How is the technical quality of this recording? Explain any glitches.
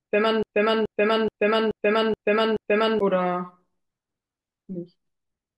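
The recording has one clear glitch at the start. A broken-record loop is already running when playback begins and lasts until about 3.0 s. A fragment roughly 0.43 s long plays six times back to back, identical each pass, giving a stuttering, mechanical rhythm before normal speech takes over. The likely cause is a stall in the player, encoder or stream that kept resending the last buffered piece. Whatever speech belonged in those first three seconds is missing.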